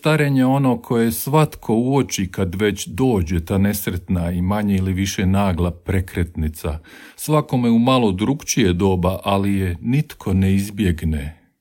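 A speech recording, and nothing in it is technically wrong.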